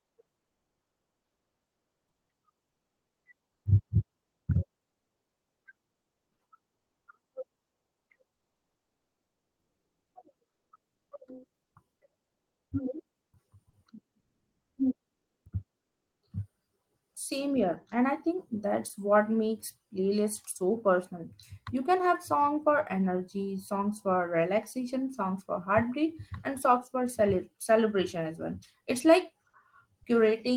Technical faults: comfort noise in place of the background

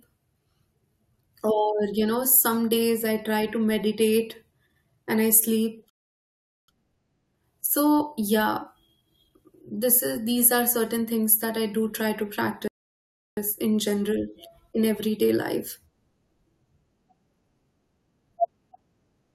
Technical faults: rebuffering stall

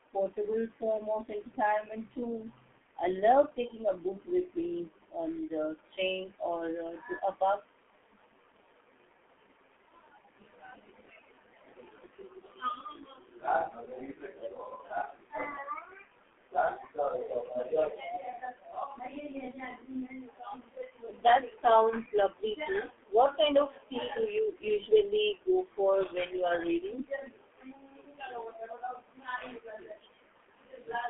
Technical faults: G.723.1 codec

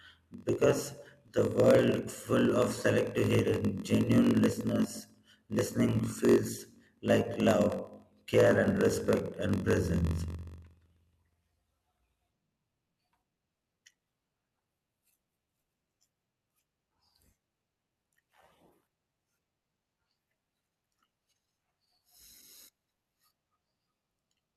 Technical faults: block size mismatch (padded)

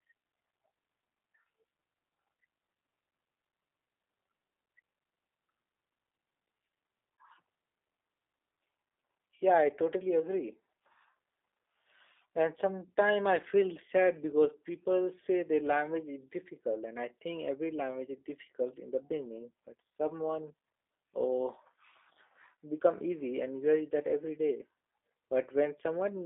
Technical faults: G.729 codec

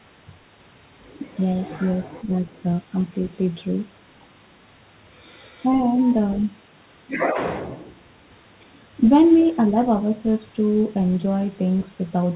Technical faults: speech suppressed in double talk

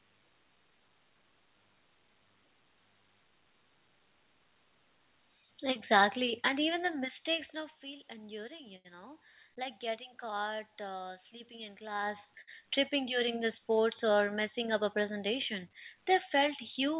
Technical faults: zipper noise; short stall from a late packet; jitter buffer speed-up

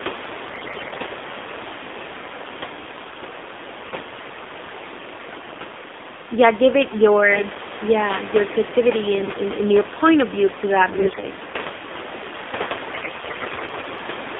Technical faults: AMR narrowband mobile codec; AMR bit errors

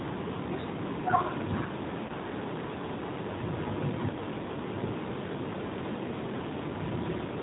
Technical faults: G.729 codec; VoIP packet loss concealed by the speech codec

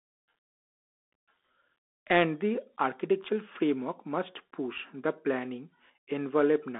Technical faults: Bluetooth CVSD headset codec

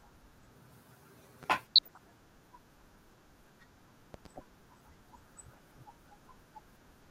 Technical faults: loud pop; DAB burbling

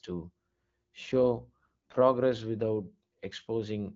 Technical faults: AMR bit errors

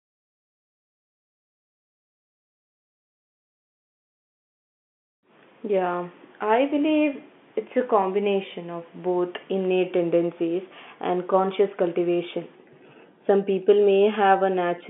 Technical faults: none

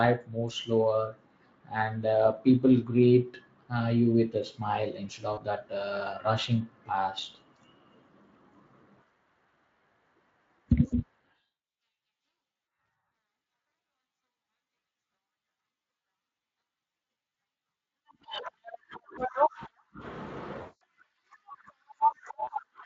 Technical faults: VoIP packet loss concealed by the speech codec

